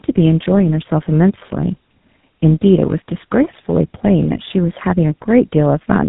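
Throughout, tandem speech coding: two low-rate speech codecs in a row, nothing above 3.8 kHz, and warble and roughness compounded beyond what any single codec produces.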